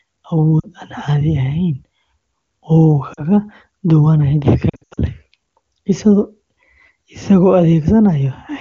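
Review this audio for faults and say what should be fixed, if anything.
You've got lost AMR speech frames in three spots. At 0.59 to 0.66 s and 3.13 to 3.23 s there are short dips, each about 40 ms of missing audio, which fits two dropped 20 ms frames. From 4.69 to 4.99 s it's worse: losses scattered across roughly 280 ms, the longest run about 80 ms, so the sound drops to near silence before coming back rough. That's the decoder patching over corrupted frames by repeating the last good pitch and vocal-tract settings at falling gain, and in wideband that fade is quick. The HD Voice (AMR-WB) coding itself sounds clean, consistent with its top rate. To prevent it, improve the radio link or add error protection so fewer frames fail their checksum.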